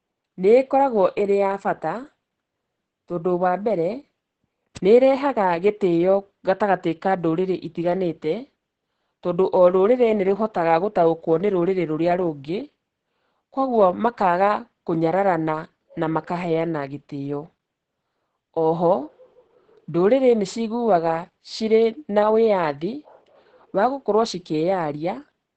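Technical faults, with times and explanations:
Throughout, Opus voice compression: the speech has nothing above 8.6 kHz, matching the wideband limit of the SILK linear-prediction coder, and its coarsely coded excitation leaves it heavily muffled, hoarse and slightly robotic, which fits a bitrate around 10 kbps.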